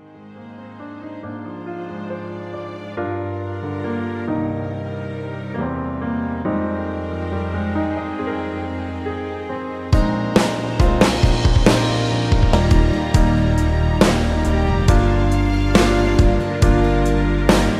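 A stream segment skipped, most likely because one segment failed to load and the player moved to the next. At 12.53 to 12.56 s the sound jumps abruptly ahead with a brief blip.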